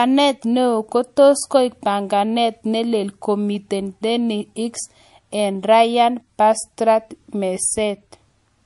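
The speech sounds watery and swirly throughout, with nothing above 11.3 kHz. The likely cause is MP3 compression at a bitrate near 48 kbps.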